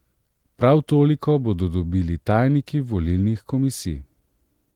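The speech has passed through Opus voice compression at 20 kbps in hybrid, full-band mode, which leaves only light coding effects, and no technical faults can be heard.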